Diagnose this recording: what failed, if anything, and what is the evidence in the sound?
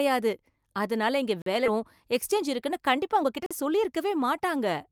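Gap between chunks, at the storage or playback stage. Hard-edged holes of 44 ms open at 1.42 s, just after "அதனால இங்க", and again at 3.46 s. They are spaced 2 s apart. This points to 2 s chunks, each starting late and leaving silence at the join.

Skip ahead, in the network path or at the jitter buffer. At 1.66 s, right after "அதனால இங்க வேலை", playback jumps forward with no fill. Roughly a second of speech is gone. A stretch was dropped while later audio was already waiting, so the two sides join almost directly.

Jitter buffer speed-up, also at the receiver's buffer. From 1.70 s to the end the speech runs at 109% speed. Pitch stays the same, and the delivery sounds hurried. The buffer was still over its target and kept cutting short pitch-period pieces to reduce delay.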